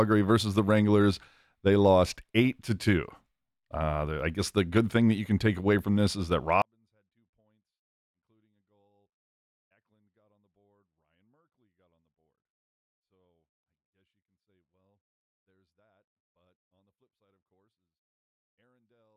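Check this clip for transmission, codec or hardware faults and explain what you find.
One fault is present: a 24-bit alignment error that leaves the speech far too quiet. From 6.62 s, just after "from this is that", to the end, the level falls by about 48 dB. The 24-bit samples sit in the low bytes of 32-bit words but are read as full 32-bit values. The speech stays clean but becomes almost inaudible.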